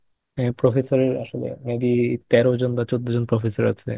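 Nothing stood out on listening to the speech here.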